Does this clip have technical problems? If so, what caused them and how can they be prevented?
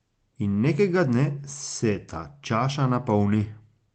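No, this speech clip has no technical faults to fix. It has gone through a WebRTC call path, and the top of the spectrum stops at about 8 kHz, which fits an Opus encode at a modest bitrate.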